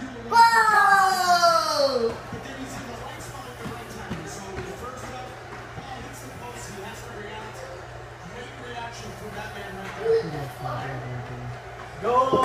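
Nothing goes wrong anywhere in this one; there's no fault to point to, so it's just an uneventful listen all the way through.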